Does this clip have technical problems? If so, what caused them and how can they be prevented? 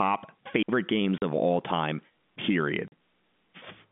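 Yes. At 0.63 s there is a digital wireless dropout. The sound vanishes for 60 ms and returns at 0.69 s. The wireless link lost too much data, so the receiver muted briefly behind a very short fade. The result is a clean hole of near silence. No burst of noise comes before or after it. Prevention: keep the transmitter in clear line of sight, close to the receiver, on a channel free of interference.

Packet loss filled with silence appears twice, from 1.18 to 1.22 s and from 2.88 to 2.92 s. Each gap lasts 40 ms, which fits two lost 20 ms packets. The receiver played silence where the missing data should have been. Both holes have hard edges where the sound cuts out and back in. This is different from the faded mute earlier. Prevention: use a jitter buffer with packet loss concealment, and give the voice traffic priority on the network. The narrow telephone band heard throughout comes from the G.711 line coding, which is carrying the sound as expected.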